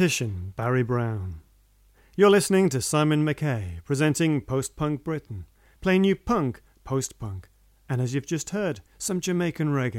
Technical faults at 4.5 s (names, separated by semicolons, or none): none